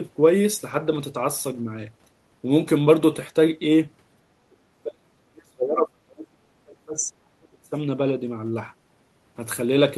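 This speech clip most likely passed through an echo canceller that met double talk it could not untangle, mistook the near talker for loudspeaker echo, and clamped down on both, leaving speech suppressed in double talk from 4.33 to 7.75 s. Across roughly three seconds of that span the voice sinks, thins and breaks into fragments, falling by something like 35 dB at its deepest, all within a call-codec band that tops out near 12 kHz, consistent with Opus at about 32 kbps.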